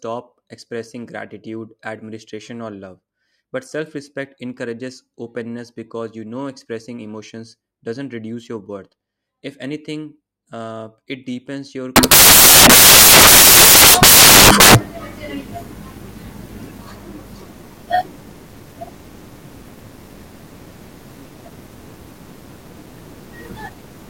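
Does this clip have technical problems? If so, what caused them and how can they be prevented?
Yes. From 11.96 s to 24.09 s, right after "uh it deepens your", the speech turns into loud, harsh broadband noise. This is samples built from the wrong bytes. The reader misaligned or swapped each sample's bytes, so the noisy low bits became the dominant part of every value. To prevent it, make sure the reader's byte order, sample width and start offset match how the file was actually written.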